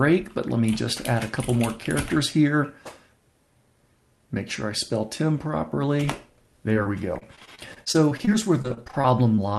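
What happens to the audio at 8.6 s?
At 8.6 s the call is in a stretch of repeated packet loss, running from 6.73 to 9.39 s. Around two dozen short dropouts, none longer than 29 ms, are each patched by extending the previous sound, leaving the audio choppy and robotic with small pieces missing.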